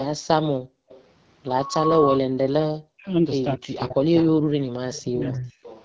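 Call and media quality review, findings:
AMR wideband (HD Voice) codec, whole clip: speech coder running at the 8.85 kbit/s rate, low enough that its pulse-driven vocal tract model can't track the speech cleanly. Sound comes out rough and raspy throughout, with the top band above 6.4 kHz filled in by shaped noise rather than real detail.

Background gated by the echo canceller, 0.58 to 0.89 s: canceller clamped the microphone path while the far end's loudspeaker was active, pulling it down by about 40 dB at the deepest point. Room sound drops out for roughly a third of a second, then returns as the canceller releases.

Echo leak, 0.89 to 1.04 s and 5.34 s to end: likely residual echo not removed by the far side's canceller and sent back. Delayed copy heard at 231 ms, about 25 dB below the speech, then at 375 ms, about 20 dB below.

Loudspeaker feedback squeal, 1.47 to 2.22 s: acoustic loop between loudspeaker and microphone with gain above one at 1.1 kHz. 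Single tone builds over a little under half a second to about 5 dB above the signal, a sustained squeal.

Speech suppressed in double talk, 2.84 to 3.08 s and 3.56 to 5.54 s: both ends talking at once, with the canceller likely unable to separate near talker from echo and attenuating everything. Speech dips by up to about 40 dB, briefly in the first span and for about a second and a half in the second. High-pass filtering in the call microphone path is audible only as the absent deep bass.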